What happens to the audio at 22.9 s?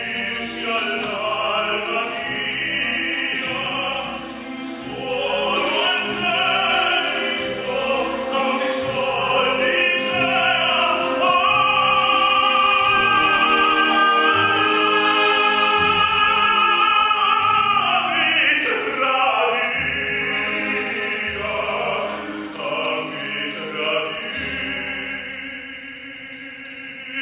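Nothing goes wrong at 22.9 s; the audio plays through that moment without any fault.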